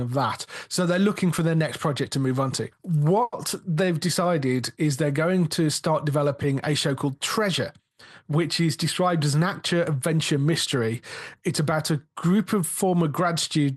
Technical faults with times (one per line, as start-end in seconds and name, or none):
3.23-3.34 short stall from a late packet